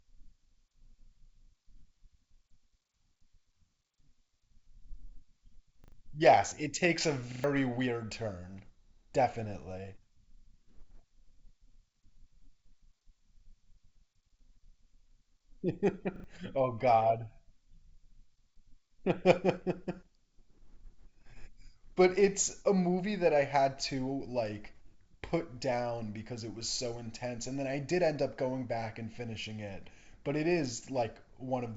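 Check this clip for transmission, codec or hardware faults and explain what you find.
Three stutters from a repeated buffer are the faults here, set against wideband telephone-style sound that cuts off near 7.7 kHz, as G.722 coding at what sounds like 64 kbit/s would.

Repeated buffer, at 5.84–5.92 s, 7.32–7.44 s and 16.16–16.24 s: audio arrived late, so a 40 ms block replayed two, three, then two extra times, dropping roughly 70, 100, then 70 ms. It's heard as a brief stutter. A waveform shows identical 40 ms segments with hard joins, and a spectrogram shows repeating vertical slices.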